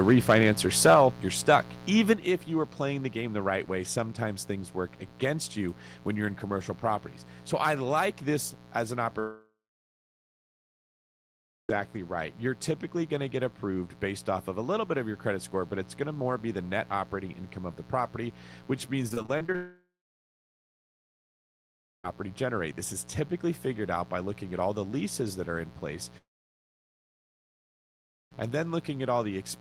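A dimmer, rectifier or unshielded lead is letting 60 Hz switching spikes into the chain, so a steady, raspy mains buzz runs under the whole clip at about 15 dB below the speech.

From 0.08 to 0.51 s and 0.85 to 1.05 s the input gain was likely set too high, driving peaks about 5 dB past the converter's limit. This microphone overload flattens their tops and gives a harsh crackle. At 0.94 s the input volume is stepped down by 4 dB, and speech and background drop together.

At 2.10 to 2.13 s a milder overload, about 1 dB over, is followed at 2.13 s by a 6 dB step down just before "if you are playing". At 8.01 s there is a further 1 dB step.

At 9.19 s, after "this as an", a long network dropout loses 2.5 s. The last sound smears on and fades, then silence until 11.71 s.

From 19.09 to 19.56 s repeated packet loss leaves seven short holes, the longest 25 ms. Each is patched by stretching the previous sound, which makes the speech choppy. 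It runs straight into another dropout from 19.56 to 22.06 s.

A third dropout follows from 26.18 to 28.37 s.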